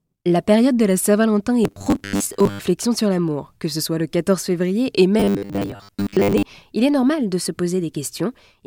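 A speech clip with robotic sound from repeated short buffers at 1.64–2.59 s, ending before "sur l'amour", and 5.20–6.44 s, between "février et" and "il est normal de". A rigid 100 Hz buzz fits a 10 ms block being looped, likely because new audio arrived too slowly, replacing about half, then most, of the real signal.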